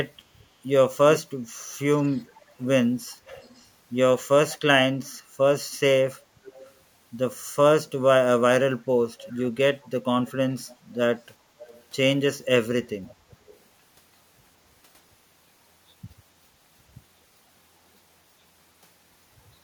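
Echo leak turns up in eight patches: 1.94 to 2.64 s, 3.26 to 3.68 s, 4.49 to 4.58 s, 6.44 to 6.72 s, 7.87 to 7.91 s, 9.23 to 10.76 s, 11.6 to 11.83 s and 13.06 to 13.58 s. Each is a faint copy of the speech trailing it by 414 ms, sitting quiet, roughly 25 to 40 dB under the voice. It's likely a far-end loudspeaker whose echo canceller let some of its mic pickup slip back down the line.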